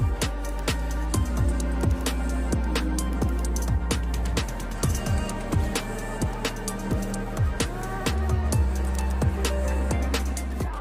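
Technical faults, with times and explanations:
Nothing stood out on listening to this recording.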